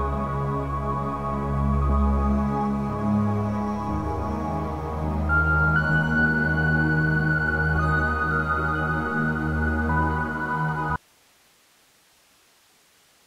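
At 10.96 s an audio dropout to a faint residue cuts in abruptly, unlike a fade, leaving only hiss roughly 35 dB down, likely a lost signal on a still-live path, to the end.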